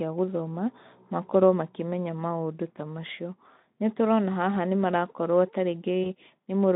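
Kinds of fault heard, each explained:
VoIP packet loss concealed by the speech codec: at about 6.03 s the sound smears briefly into a fading buzzy tone or coloured noise and stays weak or distorted until 6.08 s. About 20 ms went missing, and the Speex decoder filled it by extending its last pitch and filter at falling gain.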